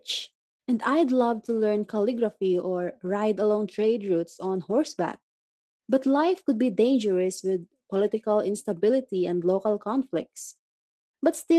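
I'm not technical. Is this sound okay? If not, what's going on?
Yes, this speech sounds fine, with nothing wrong to hear. In the pauses between phrases the background goes quiet, which is the muted pauses feature doing its job, and the sound comes back in time for the next phrase, losing only very quiet sound.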